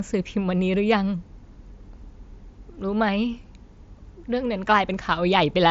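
No technical faults can be heard in this recording.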